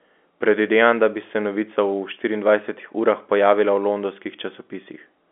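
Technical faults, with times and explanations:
No faults found; the speech sits in the ordinary G.711 telephone band, 250 Hz to 3.4 kHz, with nothing above 3.7 kHz.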